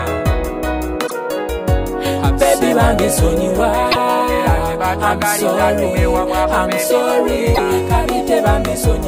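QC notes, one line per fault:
1.03–1.11 s, 3.88–3.96 s, 7.51–7.60 s: damaged data in a compressed stream. Each brief blip comes from corrupted frames that the decoder misreads, losing sync until it finds the next header.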